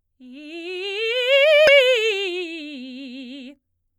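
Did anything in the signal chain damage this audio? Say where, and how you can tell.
Yes. Damaged data in the compressed music stream at about 1.67 s makes the decoder misread frames and lose sync, so a brief glitch cuts into the music.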